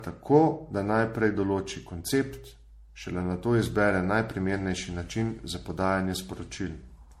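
Across the whole speech recording, the audio seems to have passed repeatedly through a lossy encoder, most likely MP3 at a setting that fits around 64 kbit/s, re-encoded something like seven times. That generation loss lets each pass requantise on a shifted frame grid, stacking noise and spectral gaps. The result sounds swirly, hollow and smeared beyond what one such encode would produce, consonant attacks are blurred, and nothing remains above 16.5 kHz.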